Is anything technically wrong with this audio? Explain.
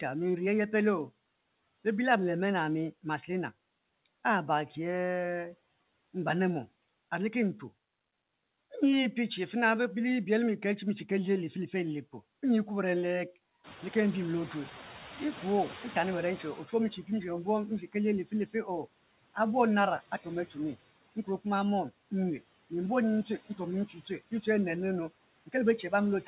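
Yes. Throughout, there are noise suppressor artifacts. The background is pulled down by about 17 dB, sinking between words and returning under them.

From 13.63 to 16.71 s, the noise suppressor is catching up. Room noise jumps by about 16 dB near 13.5 s. The suppressor's estimate lags, so the noise comes through louder, then settles over about 3.1 s to roughly 11 dB of reduction.

Speech is cut by the noise suppressor twice. At 18.25 to 18.68 s, just after "ali li", the suppressor mistakes speech for noise. It drops it by up to about 16 dB for roughly a fifth of a second, so the sound turns faint and swallowed. At 23.87 to 24.1 s, a shorter dip of up to about 10 dB swallows a brief stretch the same way.

Nothing is heard above 4 kHz, which fits a G.711 mu-law call path at 64 kbps.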